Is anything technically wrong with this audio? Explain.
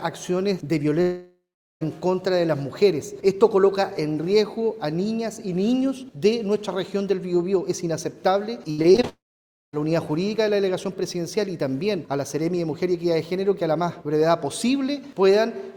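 Yes. From 1.01 to 1.83 s, and again from 9.09 to 9.75 s, the sound breaks into a fading buzz that decays to silence, about 0.42 s and 0.55 s of it respectively, before resuming further on. These are long network dropouts. The likely cause is that about 0.8 s and 0.64 s of audio never arrived, and the receiver stretched the last sound until it gave out.

Between 8.71 and 9.05 s, just before the second dropout, the sound turns choppy and robotic, with five short holes (the longest about 72 ms) covering roughly 42% of that stretch. This is repeated packet loss: each missing piece is patched by extending what came before, and the next gap arrives almost immediately.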